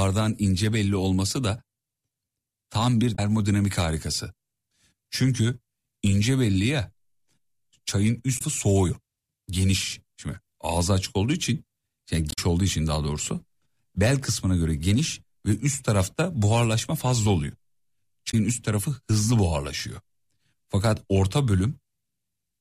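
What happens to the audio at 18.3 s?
From 18.27 to 18.34 s there is damaged data in the compressed stream: the decoder misreads corrupted bytes, loses frame sync and hunts for the next header, producing a brief 70 ms chirp, squawk, click or short hole.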